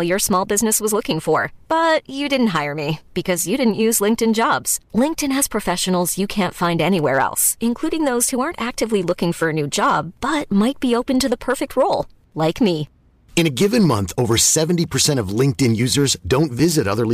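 From start to finish the loudest moments of the speech carry a brittle crackle and a rasp on the peaks, while quieter passages stay clean. That is hard clipping: the signal was driven about 7 dB past what a stage in the chain could pass, so around one percent of samples, the tops of the biggest waveform excursions, were sliced flat. Those squared-off peaks throw harmonics high into the spectrum, which the ear hears as the crackle.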